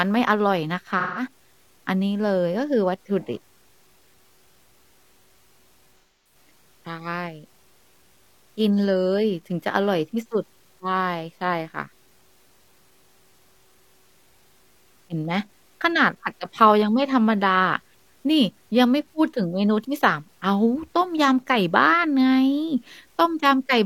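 From start to finish the speech carries a grainy, rough distortion that rises and falls with the sound itself. Quiet passages turn gritty and the faintest tails sputter between steps rather than fading smoothly. This is likely low bit depth without dither, consistent with truncation to about 10 bits, leaving error roughly 40 dB below the signal. On a waveform, low-level stretches look stair-stepped; a spectrogram shows a signal-following noise floor instead of a clean, steady one.

At 0.99 to 1.23 s, then again at 6.0 to 6.35 s, AAC frame loss with concealment breaks in. The decoder patches each gap by reusing and reshaping the last good spectrum, so the sound turns smeared and phasey. Their lengths fit roughly four and six lost frames. A spectrogram shows blurred, streaky blocks with lost harmonic detail; the waveform envelope looks flattened there.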